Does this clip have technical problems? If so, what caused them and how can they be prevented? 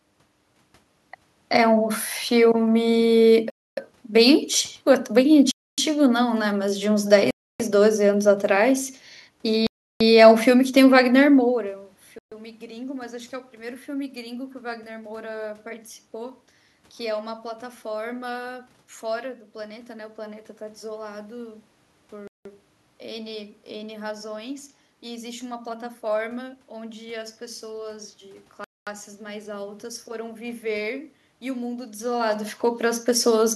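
Yes. The speech cuts to silence seven times, at 3.50, 5.51, 7.31, 9.67, 12.18, 22.27 and 28.64 s, for between 0.13 and 0.34 s each, then carries on. That's a Bluetooth stall, likely interference holding up packets until the headphones' buffer ran dry. Keeping the phone close, with a clear line of sight and away from busy 2.4 GHz Wi-Fi, should prevent it.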